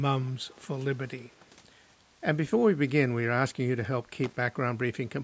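Speech, with two faults. From 0.46 to 0.59 s a very faint delayed copy of the voice returns about 239 ms late, an echo leak, likely from a loudspeaker on one side of the call getting past its echo canceller. From 4.24 to 4.36 s there is a short irregular burst of scratchy loose connector crackle, where a worn or dirty contact makes and breaks as it moves.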